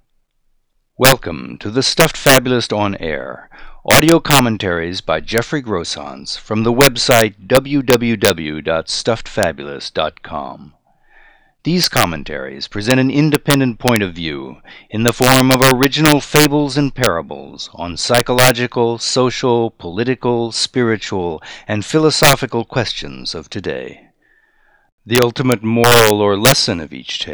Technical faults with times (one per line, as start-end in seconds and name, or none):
0.00-27.34 integer overflow